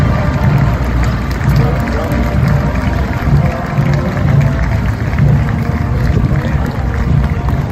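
Across the whole clip the loudest moments carry a brittle crackle, a grainy edge on each peak. This is hard clipping: the signal is driven about 5 dB past what a stage can pass, so a small fraction of peaks are sliced flat, spraying high harmonics.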